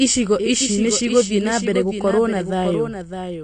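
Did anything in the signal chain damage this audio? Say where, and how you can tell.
Yes. At the capture or editing stage, a doubled audio track runs throughout: a full-band copy trails about 0.7 s behind, about 10 dB quieter. This likely comes from a slower second path or out-of-step edit.

At the codec stage, AAC compression damage is plainly audible throughout. Nothing remains above 9.8 kHz, which fits AAC-LC at a bitrate around 32 kbps, and it leaves the speech dull and smeared.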